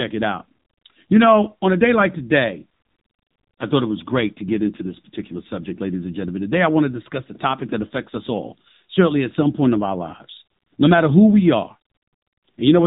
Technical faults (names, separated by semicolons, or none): AMR narrowband mobile codec